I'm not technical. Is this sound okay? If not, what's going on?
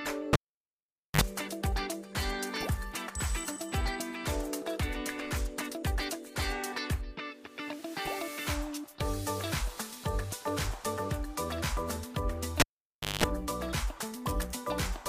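No. A live cable was pulled and plugged in twice, at 0.33 to 1.21 s and 12.60 to 13.24 s. Each time you hear a pop, near silence, a short 50 Hz mains hum as the plug reconnects, then another pop as the sound returns.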